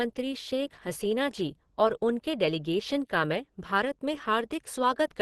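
Likely low-rate Opus compression in hybrid speech mode runs throughout, cutting everything above 12.1 kHz and leaving the speech plainly muffled and hoarse, which fits roughly 16 kbps.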